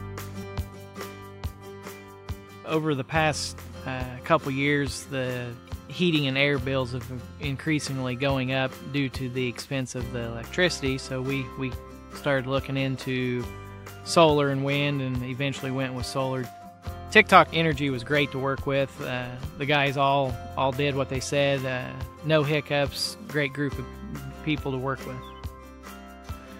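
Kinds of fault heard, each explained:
No faults detected in the audio.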